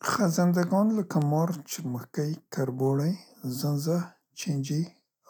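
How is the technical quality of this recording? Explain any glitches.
The recording has two bit error spikes, at 1.22 s and 2.87 s. A single corrupted bit in one to three consecutive samples forces the value away by a power of two before it snaps back. Each is heard as a sharp tick, louder at 1.22 s (about -21 dBFS, three samples) than at 2.87 s (about -33 dBFS). On the waveform they appear as isolated needles, and on the spectrogram as thin vertical lines spanning the full spectrum.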